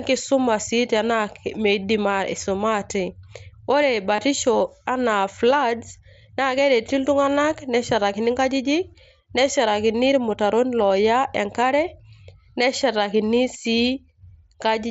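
Concealed Bluetooth headset packet loss at 4.16 to 4.18 s and at 10.89 s: lost speech packets were patched by repeating recent waveform, leaving brief buzzy blips.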